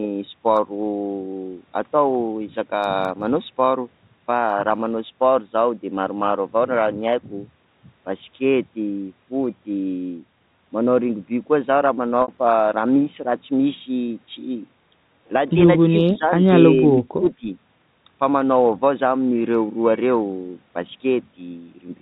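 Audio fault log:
12.22–12.28 s, packet loss with pitch repetition: a brief held, buzzy sustain replaces the sound for about 60 ms. The receiver bridged the gap by repeating the last pitch period and fading it. The length fits roughly three 20 ms packets going missing.
15.87–16.33 s and 16.74–17.48 s, speech suppressed in double talk: the talker's level dips by roughly 15 dB, then by around 20 dB, over about 300 ms in each stretch. The likely cause is an echo canceller turning the talker down while both sides spoke at once.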